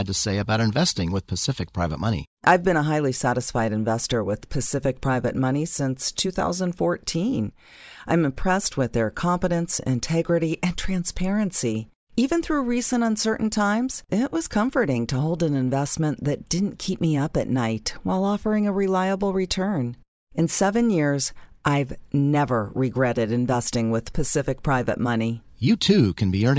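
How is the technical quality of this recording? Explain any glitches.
The recording's technical quality is sound, with no glitches to explain.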